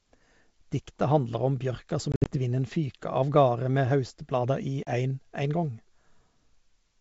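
Speech over a G.722 wideband link, with packet loss on an ADPCM call: from 2.12 to 2.37 s, just after "handlar om bjørka", about 100 ms drops out in scattered silent holes, longest 60 ms, and again briefly around 4.83 s, each followed by a slightly distorted recovery as the decoder's predictor resynchronises.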